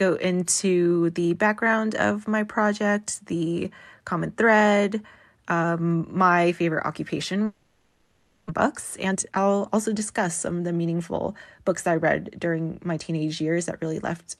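From 7.45 to 8.60 s, right after "um my favorite occupation", the speech gives way to a fading, buzzy continuation of the last sound for about 1 s, and roughly 0.6 s of material never returns. This is likely a long network dropout. Unlike a brief packet-loss glitch, the concealment stretches on and audibly decays, and the speech resumes at a later point rather than where it broke off.

From 9.05 to 11.95 s, just before "read during my", the speech runs about 13% fast while its pitch stays put. This is a jitter buffer speed-up: the receiver repeatedly trims pitch-period-sized pieces, removing roughly 0.4 s in total to shed excess buffered delay. A resampling error would raise the pitch, but here only the pace is hurried.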